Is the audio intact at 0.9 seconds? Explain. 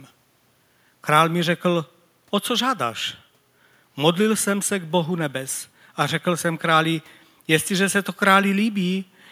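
Yes, the speech at 0.9 seconds is intact, with no dropout, click, distortion or other fault to be heard at that point.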